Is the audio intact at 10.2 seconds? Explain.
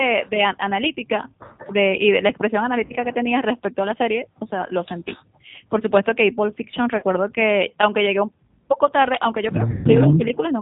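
No. From 10.17 to 10.23 s the speech dips by around 10 dB. This is speech suppressed in double talk, likely from an echo canceller that took the talker for far-end echo while both sides spoke. Unlike a packet-loss dropout, the sound dims rather than going silent or repeating.

The G.729 codec also shapes this moment. At 8 kbit/s it rebuilds speech from a filter, a pitch predictor and sparse pulses, and it cuts everything above 4 kHz. The result is a rough, synthetic, band-limited tone across the whole clip, not a brief dip.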